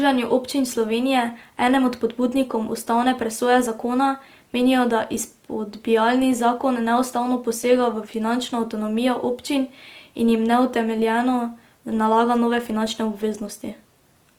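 Opus compression runs throughout the speech. Tones sound rough and grainy rather than swirly, yet the band still reaches about 20.2 kHz. The likely cause is Opus's music mode filling bit-starved bands with folded or noise content, consistent with roughly 24 kbps.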